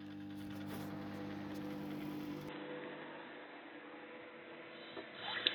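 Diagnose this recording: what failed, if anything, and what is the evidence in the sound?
At 2.49 s the spectrogram is flat-topped at 4 kHz, with no waveform gap or level step and a faint new noise floor. At the capture-device stage, the input likely switched to a poorer device.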